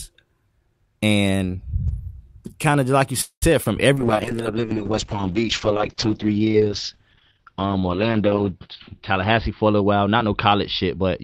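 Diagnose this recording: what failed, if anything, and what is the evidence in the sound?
The network path, most likely. Right after "kind of like you", from 3.21 to 3.44 s, the sound hangs on as a buzzy, hissy continuation that fades to silence for about 0.1 s, then picks up where it stopped. That points to a call audio freeze: packets were likely held up and the jitter buffer ran dry, so the receiver stretched the last sound and a gap was inserted with nothing lost.

Also network. At 3.64 to 3.67 s there's a quick smear. That's short concealed packet loss. About 20 ms of audio never made it to the decoder in time, so the receiver bridged the hole by extending what came before and then blended back into the real signal.

Codec stage, driven by the network's bandwidth estimate. From 3.95 s to the end it goes rough and muffled. That's a call bitrate drop from 32 to 7 kbps, with bandwidth cut from 20 kHz to 6 kHz. 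It sits at the lowest rate for about 4.6 s and never clears before the clip ends.

Jitter buffer, again on the receiving side. From 9.11 s to the end the talking sounds hurried at unchanged pitch, running at 109% speed. That's a jitter buffer speed-up. The buffer held more than its target, so the receiver kept trimming pitch-period-sized slices, roughly 0.2 s in total, to pull the delay back down.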